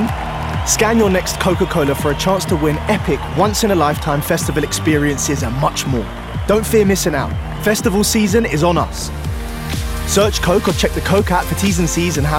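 No dropouts, clipping, glitches or level jumps turn up anywhere in the recording.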